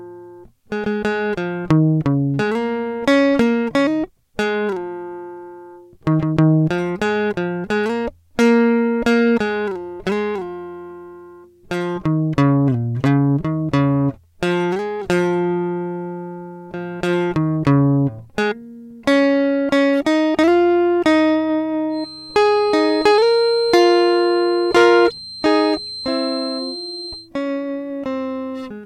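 Feedback whistle from 21.9 to 27.3 s: a thin 4.1 kHz tone that slowly swells and fades sits some 15 dB below the music, likely from a loudspeaker-to-microphone loop held just short of runaway. Hard clipping from 24.77 to 24.97 s: the music's peaks overdrive a stage by about 4 dB, are cut flat, and crackle with added high harmonics.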